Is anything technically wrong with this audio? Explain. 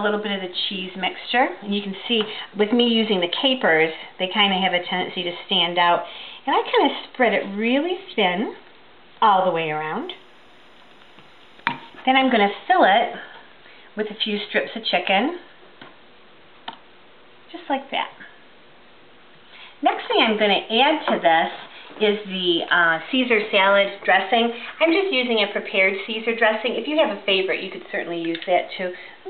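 Yes. From 10.02 to 12.02 s there is timecode bleed. Linear timecode from an adjacent track or cable has coupled into the audio path. The code is a square wave that flips between two frequencies, around 1 kHz and 2 kHz, with a rhythm consistent with 25-frame code. It sits very low, roughly 45 dB under the programme, and comes through as a faint, steady chirping warble behind the sound for those two seconds.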